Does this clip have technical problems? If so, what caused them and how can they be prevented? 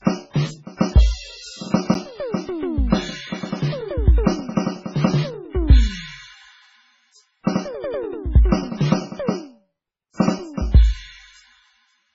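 Yes. Throughout the music, the sound is watery and swirly, with a metallic chirp on bright, hissy parts and smeared attacks, and nothing at all above 7.6 kHz. This is likely heavy MP3 compression: starved of bits, the encoder has cut the treble at a fixed frequency and zeroed weak frequency lines that flicker on and off between frames. The damage fits a very low bitrate of around 16 kbps. To prevent it, encode at a much higher bitrate or keep a lossless master.

At 1.94 s there is a tick or dip, a block of digital silence about 9.7 ms long. The audio drops straight out and comes back with no fade. The hole is too short to hear as a gap. A gap like this points to the output buffer not being filled in time. To prevent it, give the playback or processing chain larger buffers or more processing headroom so it never runs dry.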